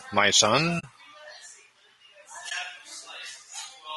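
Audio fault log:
throughout: low-delay AAC compression. The speech sounds rough and grainy, with noise between harmonics. This is likely AAC-ELD's short frames at a low bitrate, around 32 kbps.
0.79–0.84 s and 2.49–2.52 s: AAC frame loss with muting. Lost frames are silenced. Overlapping windows fade the sound out and back in, leaving soft gaps of about 40 ms and 20 ms.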